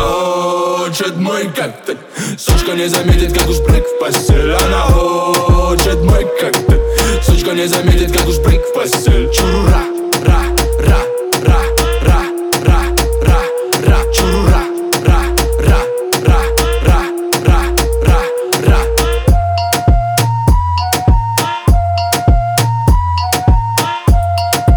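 From 5.50 to 8.73 s, a block size mismatch (truncated) discards the tail of each block, producing a buzz at about 92 Hz, the block rate.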